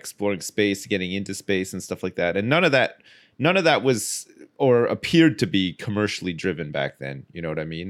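No faults turn up anywhere in this recording; the speech just carries on from beginning to end without a single glitch, dropout or odd sound to point at.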